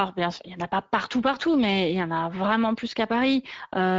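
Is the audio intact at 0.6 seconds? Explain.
No. Speex codec damage is present at 0.6 s and across the whole clip, not just at that moment. Speex is a CELP speech coder that models the vocal tract and spends a limited bit budget on the excitation signal driving it. Here that budget is thin, with damage in line with a setting around 17 kbps. The speech comes out plainly noisy and hoarse.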